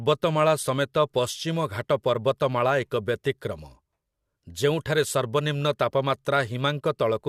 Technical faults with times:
none

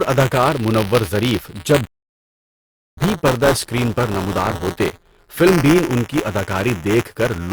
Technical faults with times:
0.00-7.53 buffer tearing
1.86-2.97 rebuffering stall

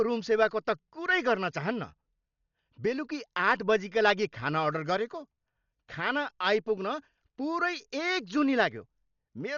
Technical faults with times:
0.00-9.57 Dolby Digital compression

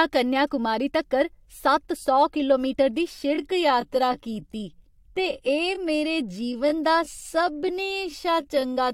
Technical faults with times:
3.10-8.94 time-stretched section

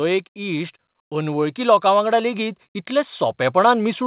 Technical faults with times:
0.33-4.07 automatic gain rising

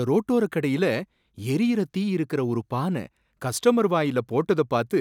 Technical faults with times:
none

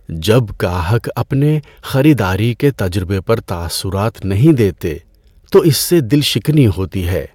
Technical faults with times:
4.46-4.51 hard clipping

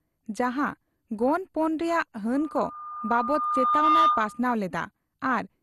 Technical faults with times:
0.00-5.63 MP2 compression
2.34-4.44 loudspeaker feedback squeal

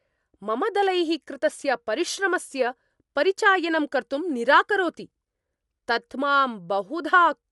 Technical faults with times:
0.00-7.52 Dolby Digital compression

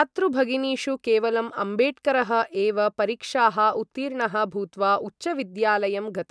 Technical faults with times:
none

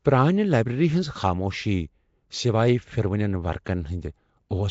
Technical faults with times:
0.00-4.70 Nellymoser compression
3.65 pre-echo

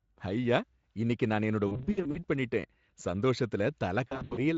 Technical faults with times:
1.67-2.18 VoIP packet loss concealed by the speech codec
4.07-4.41 VoIP packet loss concealed by the speech codec

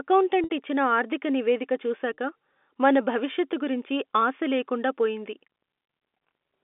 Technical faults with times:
0.44-0.50 packet loss with pitch repetition
2.14-2.18 packet loss with pitch repetition

